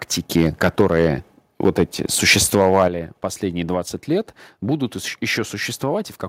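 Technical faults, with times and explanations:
0.36–1.07 s, 1.65–1.83 s and 2.28–2.87 s, microphone overload: The loudest syllables take on a harsh, crackling edge as their peaks are flattened, about 7 dB over the limit in the first stretch and about 4 dB in the later two. This is likely an input volume set so high that the converter cut off the tops of the waveform, affecting a few percent of samples.
0.81 s and 2.88 s, microphone volume stepped down: The speech and the background both drop abruptly in level, by about 4 dB and then about 7 dB, each right after or during a distorted stretch. The likely cause is the call software reacting to the overload by lowering the device's input gain in a single step.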